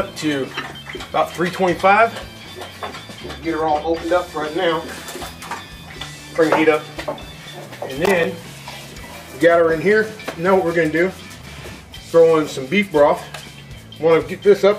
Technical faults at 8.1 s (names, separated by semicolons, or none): loose connector crackle